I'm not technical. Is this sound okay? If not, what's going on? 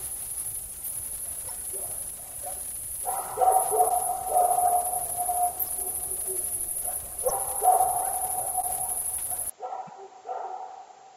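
No. There are two kinds of problem.

At 3.88 s and again at 8.61 s, the sound briefly stumbles for about 30 milliseconds: it skips slightly ahead and leaves a tiny chirp, crackle or gap. This is most likely a broken MP3 bit reservoir. MP3 files pack audio in small chunks of about 26 milliseconds, and each chunk can store some of its data inside the chunk before it. When a chunk goes missing, the next one reaches back for its borrowed data and gets the wrong bytes. The result is a short garbled burst.

At 9.50 s the sound changes character and stays that way to the end. It becomes duller and noticeably quieter, as if heard through a cheaper microphone, and a faint new background hiss sits well beneath it. There is no pause at the change. This is likely an input switched to a poorer device partway through the recording. The new device can't pick up the brightest, highest sounds, so the crispness drops away and its own tone and noise take over.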